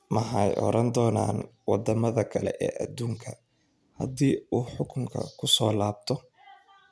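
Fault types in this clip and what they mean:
Aliasing: The speech was dropped to a lower sample rate without a proper low-pass first, so the energy above the new limit folds back down instead of disappearing. The fold sits at 11 kHz, which fits a move from 44.1 kHz to around 22 kHz. Sibilants pick up a gritty, metallic edge from tones mirrored back under that line, sitting about 30 dB below the speech, and the top end runs right up to 11 kHz.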